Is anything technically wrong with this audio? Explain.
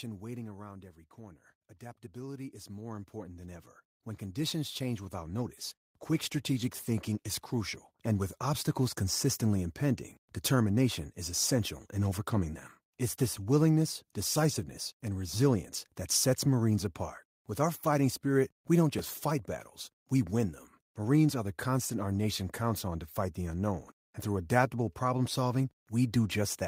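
Yes, there are four distinct faults in this speech clip.

Automatic gain falling, 0.05 to 1.01 s: the gain control judged the opening too loud and pulled its level down by about 5 dB. Speech and background sink together. On a waveform the envelope tapers steadily across that first second.

Automatic gain rising, 1.15 to 8.37 s: the gain control then judged the input too quiet and lifted it by about 17 dB over roughly seven seconds, finishing just before "obstacles consistently impending determination". Voice and noise floor swell together, seen as a widening waveform and a brightening spectrogram background.

Call bitrate drop, 5.4 to 7.69 s: the call's bandwidth estimate fell, pushing the encoder from about 32 to 17 kbps, with the low rate held for 2.23 s. The speech turns coarse and watery. On a spectrogram, upper-frequency energy thins and smears until quality returns.

Repeated buffer at 18.99 s, between "fighting spirit we don't" and "fight battles we win": fresh audio arrived late, so the device replayed its last chunk once more. 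The repeat fits a 5 ms buffer. It is heard as a tiny click, shown as a duplicated waveform segment with a hard discontinuity.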